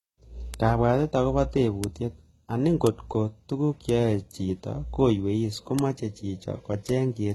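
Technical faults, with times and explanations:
Throughout: transcoding between lossy codecs. Nothing sounds above 12 kHz, and the speech carries several overlapping kinds of smearing and swirl at once. The likely cause is a chain of lossy encodes: a very low-rate HE-AAC pass, then MP3, then HE-AAC again. Each later encoder spends bits re-coding the damage left by the one before and adds its own. The lowest cut-off in the chain is the one that survives.
0.54 s, 1.84 s, 6.89 s: bit error spike. Each is one sharp, dry tick lasting a single sample. A single bit flipped in memory or on a digital link, so that sample's value leapt by a power of two and then dropped straight back. A one-sample jump has energy across the whole spectrum, so the tick sounds broadband. It has no link to the speech around it.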